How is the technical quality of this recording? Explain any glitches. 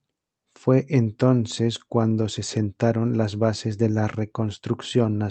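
No glitches or dropouts can be heard in this speech.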